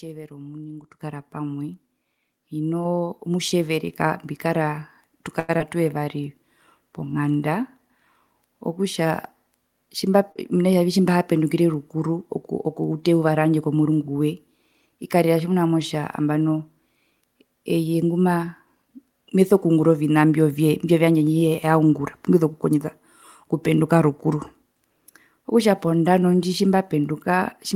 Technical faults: microphone volume stepped up; short stall from a late packet; short concealed packet loss; jitter buffer slow-down; jitter buffer speed-up

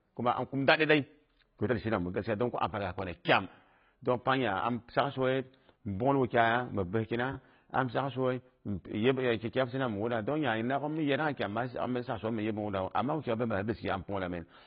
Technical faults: AAC compression

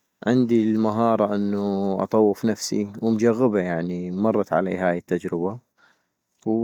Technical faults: none

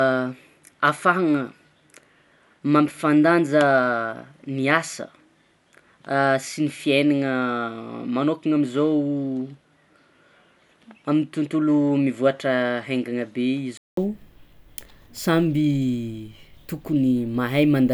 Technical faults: input switched to a poorer device

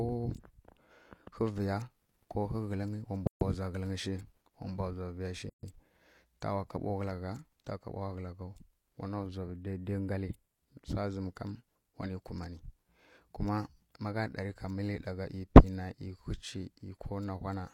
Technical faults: gap at a join of encoded pieces; channel delay (comb filtering)

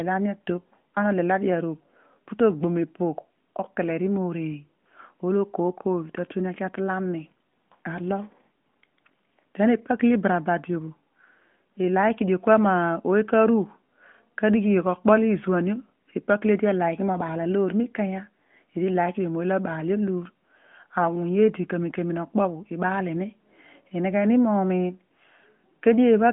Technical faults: none

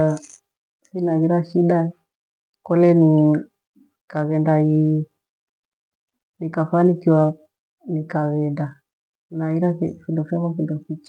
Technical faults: none

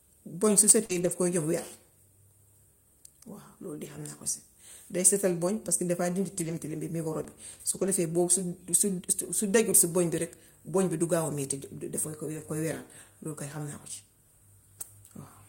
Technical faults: short concealed packet loss; lost packet rebuilt from error correction; repeated buffer

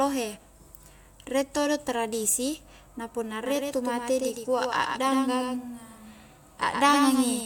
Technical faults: doubled audio track

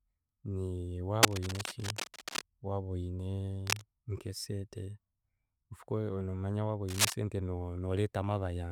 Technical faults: cable scratch noise

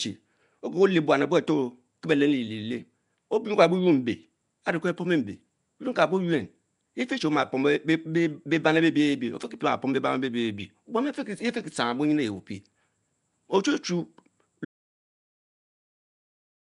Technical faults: Nellymoser compression; audio dropout to silence

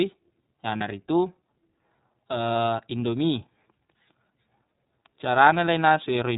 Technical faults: iLBC codec; lost iLBC frames

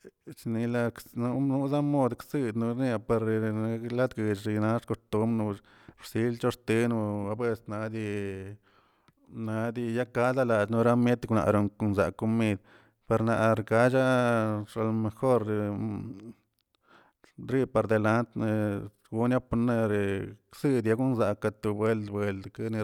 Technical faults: none

